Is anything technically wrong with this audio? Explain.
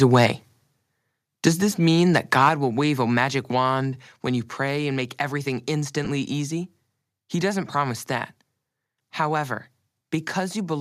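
Yes. The speech has three kinds of fault.

Microphone overload comes three times: 0.02 to 0.26 s, 1.46 to 1.48 s, and 2.15 to 2.49 s. The loudest peaks go about 6, 3 and 5 dB past the converter's limit. Their tops are flattened. The likely cause is a microphone input set too high, driving the converter into its limit. In the short second burst about 7% of samples is cut; the other two bursts clip only a small fraction. Each burst adds a harsh, crackly edge.

Microphone volume stepped down twice, right after the overloads. At 1.48 s the level drops by about 3 dB. At 2.49 s it drops by about 5 dB. Voice and background fall together, in one step. This points to call software that saw the clipping and cut the device's input volume. The drops sound abrupt, not like a smooth fade.

Lost LE Audio frames occur from 6.05 to 6.07 s, about 15 ms. That length fits two lost 7.5 ms frames. The LC3 decoder fills the gap by reusing the last spectrum with scrambled phase. 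The result is a brief grainy smear where the sound should continue cleanly. The likely light LC3 coding around it adds only slight graininess.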